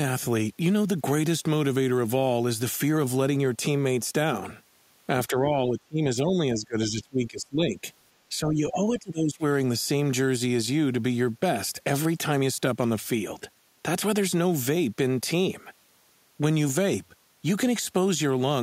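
A speech clip where the talker dips out twice, from 5.29 to 7.83 s and again from 8.29 to 9.43 s, sinking by roughly 20 to 25 dB in places. That's likely speech suppressed in double talk, with the echo canceller ducking this talker while the far side spoke.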